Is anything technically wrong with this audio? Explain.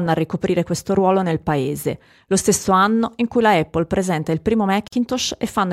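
Yes. The speech was encoded in separate pieces and joined without trimming, leaving a gap at the join of encoded pieces. The encoder's start-up delay and last-frame padding both remain, so at 4.88 s to 4.93 s a 47 ms gap cuts into the speech, with smeared edges, before it resumes where it stopped.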